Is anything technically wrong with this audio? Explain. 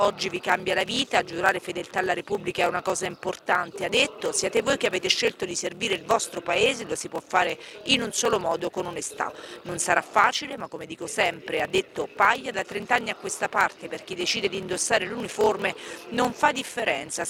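Yes. Block size mismatch (padded), throughout: blocks that fit 1024 samples are padded with zeros into larger reads, leaving gaps that buzz at 38.3 Hz and slow playback to 0.889×.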